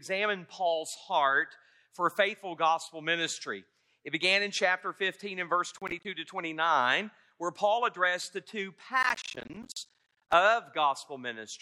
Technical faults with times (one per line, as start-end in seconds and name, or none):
5.77-6.05 processor overload crackle
9.03-10.33 processor overload crackle